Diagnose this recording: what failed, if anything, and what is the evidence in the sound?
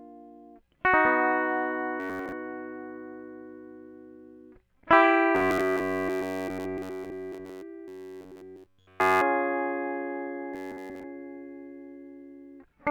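Robotic sound from repeated short buffers at the driver or buffer stage: at 2.00–2.32, 5.35–7.62, 7.88–9.22 and 10.54–11.04 s, the music becomes a 93.8 Hz metallic buzz. A likely underrun loops roughly 10.7 ms blocks. The spectrogram shows harmonic combs spaced 93.8 Hz apart, and the waveform shows identical repeating cycles.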